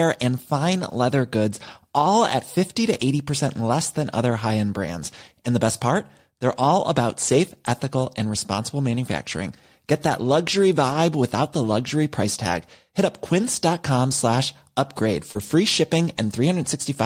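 Brief rough, noisier patches appear at 4.43 to 4.45 s, between "less than other" and "end brands", then at 7.23 to 7.33 s, 10.05 to 10.15 s, 10.89 to 10.95 s, and 12.53 to 12.59 s just after "without the luxury price". Each is a lost packet rebuilt from error correction. The receiver played the low-bitrate copy carried in the next packet, so there is no gap, just a 20 to 60 ms coarser stretch consistent with one to three missing packets.

Just after "slash upgrade", at 15.31 to 15.37 s, a short smear is a concealed packet loss. About 40 ms never arrived, and the decoder extended the preceding sound to cover it. From 15.35 to 15.41 s, a 40 ms rougher error-correction rebuild follows.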